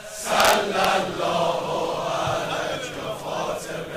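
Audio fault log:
0.40–0.85 s, integer overflow: the loudest peaks push about 1 dB past the largest value the integer format can hold. Instead of being held at the ceiling, those samples wrap around to the opposite extreme, so each one jumps across the full range in a single step. The result is a series of violent, sharp cracks on the peaks. Ordinary clipping would flatten those tops into a duller, buzzy distortion rather than snapping them to the other sign.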